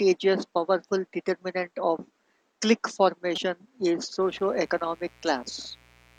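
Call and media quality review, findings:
Damaged data in compressed stream, 3.34–3.38 s, just after "powerful determinant of clique": brief chirp, squawk, click or short hole; decoder lost frame sync on corrupted bytes, resynced at next header.

Mains buzz from 4.22 s to end: steady raspy 60 Hz buzz with harmonics, about 30 dB below signal; switching spikes leaking in through unshielded path or dimmer/rectifier.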